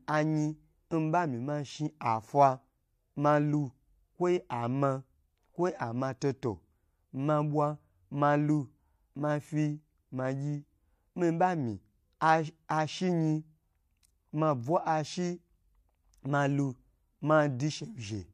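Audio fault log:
6.2 s pre-echo: a hiss of about 18 ms arrives just ahead of a sharp speech attack, roughly 11 dB above the quiet floor, and the onset itself sounds softened. The spacing fits a 36 ms transform window in which the codec never switched to short blocks, so noise meant for the loud attack spilled backward. A spectrogram shows a broadband smudge preceding the onset's vertical edge, and the waveform shows low-level fuzz before the transient.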